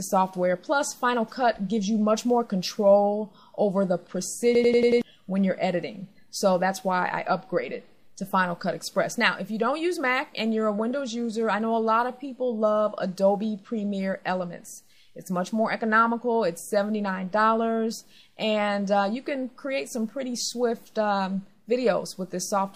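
The audio has one fault, a system hang loop, from 4.55 to 5.02 s. A short slice of sound, 92.88 ms long, repeats exactly five times. That gives a rapid stutter at 10.8 repeats per second. The length fits a 4096-sample buffer. The computer or its audio driver stalled, and the sound hardware kept replaying the same ring buffer until the system recovered. About half a second of the real audio is missing.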